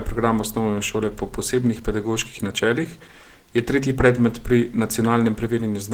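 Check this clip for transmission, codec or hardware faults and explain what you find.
Opus compression damage runs throughout and is plainly audible, likely from the encoder's hybrid speech mode. Short of bits, it fills bands coarsely, leaving the speech muffled and hoarse. The roughness fits a rate near 16 kbps, though content still reaches 20.2 kHz.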